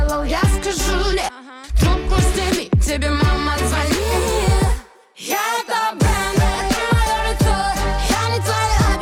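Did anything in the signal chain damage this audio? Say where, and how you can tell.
No, nothing in the chain audibly damaged this audio. No stage, from capture through to playback, leaves any mark that can be heard anywhere in the clip.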